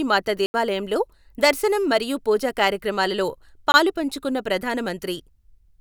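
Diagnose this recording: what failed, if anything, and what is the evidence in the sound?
Two blocks of digital silence point to the driver or buffer stage: the speech drops hard to silence from 0.46 to 0.54 s (80 ms) and again from 3.72 to 3.74 s (20 ms). The output buffer likely wasn't filled in time, so zeros went out instead.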